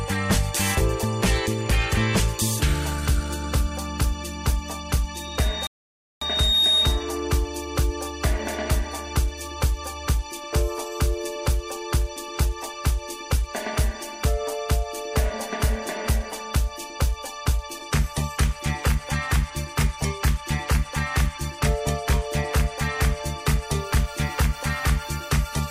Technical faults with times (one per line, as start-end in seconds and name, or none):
5.14-7.16 loudspeaker feedback squeal
5.67-6.22 rebuffering stall